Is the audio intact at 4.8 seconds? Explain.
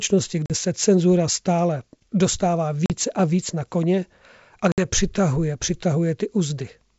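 No. Packet loss on an ADPCM call occurs from 4.72 to 4.85 s. About 60 ms drops to silence. The decoder's predictor then falls out of step, so the speech returns slightly distorted.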